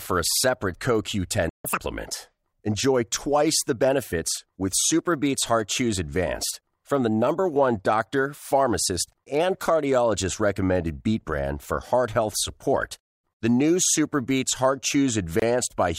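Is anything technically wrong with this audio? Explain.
Yes, there are three problems in this speech clip, two of them linked.

At 1.49 s the speech cuts out abruptly and the output stays silent until 1.65 s, about 150 ms. This is a playback stall, most likely the player running short of data or having its audio thread blocked, so nothing reached the output. What marks it as a stall rather than a dropout in the recording is that the speech resumes from the point where it stopped instead of skipping ahead.

From 1.65 s to 1.80 s the speech runs at twice normal speed, with its pitch raised by roughly ten semitones, then snaps back. This is catch-up at higher speed: the player resampled its backlog to recover the time lost in the stall. Because the speed and pitch rise together, this is a resampling effect and not a time-stretch, which would keep the pitch steady. Its position right after the silence ties it to the stall.

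From 15.40 s to 15.42 s a short silence of about 25 ms opens in the continuous speech, with edges smeared by the codec. This is a gap at a join of encoded pieces: two separately encoded sections were joined without trimming the encoder's start-up delay and end padding. Unlike the stall, the gap is very brief, shows the codec's edge smearing, and is followed by no speed-up at all.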